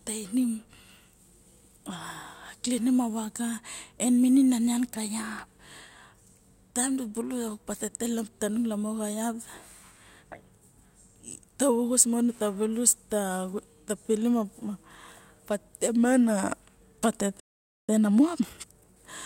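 A playback stall, most likely the player running short of buffered data or having its output thread held up, interrupts this speech recording near its end: from 17.40 to 17.89 s the output drops to silence for about half a second (roughly 490 ms), cutting the talker off mid-flow before the sound resumes. Once it restarts, the player works off the backlog it built up during the gap with time-compressed catch-up, removing small slices of the signal and cross-fading across the joins so that the audio runs at 1.5 times normal speed while keeping its ordinary pitch. From 17.89 to 18.85 s the speech therefore sounds hurried, before it settles back to its normal pace for the final moments of the clip.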